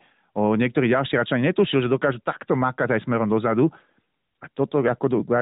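No technical faults occur at any point in the speech, so there is nothing to describe in time order.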